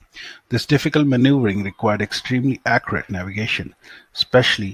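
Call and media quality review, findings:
Reviewed speech audio, no faults found, nothing to action.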